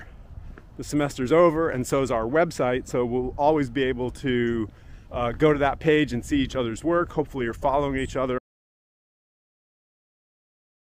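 At 8.39 s the audio drops out to silence and stays that way to the end, about 2.5 s of it. The sound is cut off mid-flow, with no fade and no room tone left, just silence. The likely cause is a lost input, such as a disconnected device or a stray mute, while recording carried on writing silence. On a waveform the trace collapses to a flat line, and a spectrogram shows a sharp vertical edge followed by empty black.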